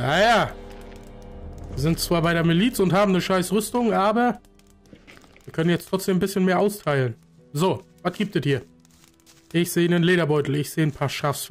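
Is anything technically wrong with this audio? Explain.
No, nothing technically wrong turns up anywhere in the recording.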